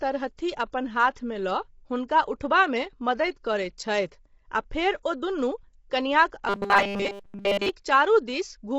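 Speech runs through the whole clip with a rough, grainy texture, and a spectrogram shows a lowered top band and noise filling the gaps between harmonics. This is plainly audible damage from low-delay AAC compression, likely AAC-ELD at a low rate around 24 kbps. At 1.14 to 1.16 s a short hiss leads a sharp attack by about 27 ms, which is pre-echo: quantisation noise spread across the transform block fills the quiet moment before the onset. On the waveform it appears as a low smear ahead of the transient, which itself sounds softened. From 6.49 to 7.70 s the sound becomes a rigid, metallic buzz at 200 Hz. This is robotic sound from repeated short buffers, likely caused by the same 5 ms stretch being replayed while the real audio is skipped, and this happens throughout the section. A spectrogram shows flat, evenly spaced harmonic lines at multiples of 200 Hz, and the waveform shows an identical 5 ms cycle repeating.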